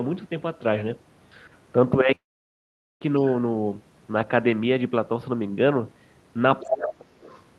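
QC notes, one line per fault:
2.15 to 3.03 s, long network dropout: A stream of packets likely stopped arriving, so about 0.86 s of audio never reached the receiver. Its concealment stretched the last sound into a brief fading buzz, but for roughly 0.81 s of that gap only silence or a faint steady floor is heard. The sound then resumes further along with the missing portion simply gone.
6.60 s, other side's voice leaking through: The echo canceller likely failed to fully remove the far end's loudspeaker playback picked up by the microphone. For about 80 ms a second voice slips in, around 20 dB below the talker, just before the suppression that follows.
6.67 to 7.14 s, speech suppressed in double talk: With both sides talking at once, the echo canceller likely could not tell its own talker from the returning echo and turned everything down. Across about 0.4 s the talker's level sags, at its deepest by something like 30 dB, so the voice dips, dulls or breaks up in pieces while the other side is active.
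7.21 to 7.41 s, other side's voice leaking through: Residual far-end echo likely escaped cancellation again once the suppression released. A faint second voice, roughly 30 dB under the talker, is audible for about 0.2 s. It sounds quieter than the earlier leak, lying under the 12 kHz ceiling of the Opus call path.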